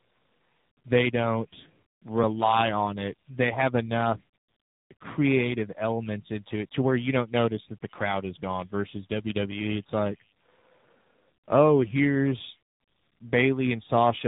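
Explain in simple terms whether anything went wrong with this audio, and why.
Throughout the clip the speech sounds rough, muffled and warbly, and nothing above about 3.8 kHz comes through, so it has a thin telephone quality from start to finish. This is tandem speech coding: the call passed through two separate speech compressors in a row. Each one decoded the audio and squeezed it again, working on the already damaged output of the one before, so the losses stacked up.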